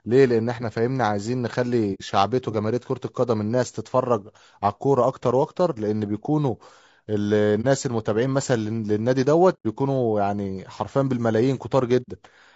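Low-delay AAC compression runs through this whole speech clip: the voice sounds rough and grainy, with noise filling the gaps between harmonics and a thin, synthetic top band, likely from AAC-ELD at a bitrate around 32 kbps. AAC frame loss with muting strikes at 1.94–2.02 s, 7.61–7.66 s, 9.53–9.66 s and 12.02–12.09 s, removing about 60, 30, 120 and 60 ms of audio. The decoder zeroes the missing spectrum, and the overlapping windows fade each hole in and out softly.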